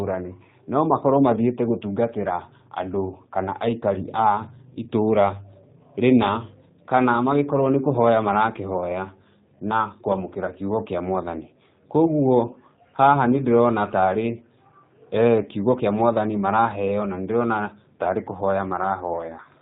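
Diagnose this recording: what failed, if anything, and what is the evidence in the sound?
Codec stage: G.729 coding throughout the speech, audibly rough and synthetic. A spectrogram shows nothing above 4 kHz, which fits the pulse-excited 8 kbit/s G.729A.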